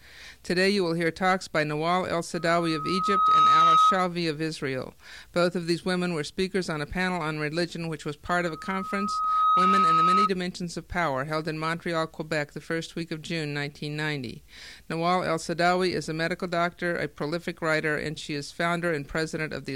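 Loudspeaker feedback squeal rises twice, from 2.34 to 4.03 s and from 8.27 to 10.30 s. A 1.3 kHz tone swells over roughly a second to about 10 dB above the sound as a microphone-loudspeaker loop runs away. That self-building swell separates it from steady hum.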